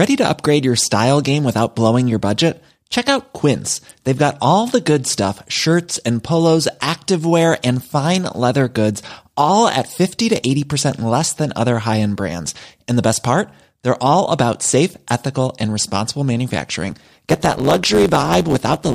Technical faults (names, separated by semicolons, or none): block size mismatch (truncated)